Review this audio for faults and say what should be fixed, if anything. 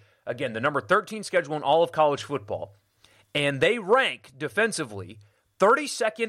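Nothing here needs fixing, as I can't hear any technical problem anywhere in the speech.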